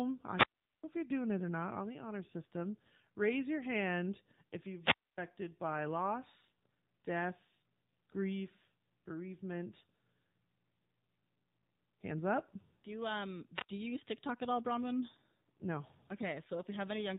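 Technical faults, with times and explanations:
Throughout, AMR narrowband mobile codec: the audio is squeezed through the AMR-NB mobile speech codec, and the damage is plainly audible. With 8 kHz sampling, nothing above 4 kHz survives. The codec rebuilds each stretch from a vocal tract model driven by a pitch predictor and a handful of pulses every 5 ms. The buzzy, synthetic texture points to a low mode of about 7.4 kbps.
0.33–0.84 s, 4.80–5.18 s and 13.54–13.69 s, wireless microphone squelch dropout: three times the analogue FM radio link fades far enough that the receiver's squelch shuts the output off. Each event opens with a brief rise of hiss or static, then falls into a hole of near silence lasting about 0.40 s, 0.26 s and 0.07 s respectively. The sound then returns as the carrier recovers and the squelch reopens.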